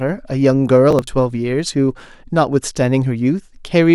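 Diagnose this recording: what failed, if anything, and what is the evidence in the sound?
The failure sits at the driver and buffer stage: processor overload crackle from 0.91 to 1.07 s. Across that stretch the speech breaks into a short, gritty tearing made of several hard-edged skips, each missing piece simply dropped rather than held or repeated. The spacing fits buffers of about 10 ms, with around five deadlines missed across the stretch. A network loss would leave concealed, smoothed gaps. This cluster instead cuts cleanly and stops once the load eases.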